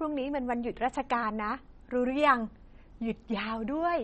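Speech with plainly audible MP3 compression throughout: nothing survives above 8.4 kHz, and weak spectral detail flickers between frames, giving a watery, swirly texture and smeared consonant attacks. The treble cut and damage level fit a bitrate around 32 kbps, likely from aggressive low-rate encoding.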